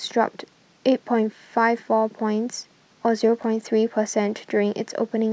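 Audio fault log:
3.41 to 3.44 s, chunks out of order: one 16 ms chunk of the speech was delivered a single chunk late and played after the chunk that should have followed it, so two short slices swap places across about 32 ms. Nothing is missing, but the waveform is joined at three hard edges where it no longer lines up, producing a brief jumbled flutter in the speech.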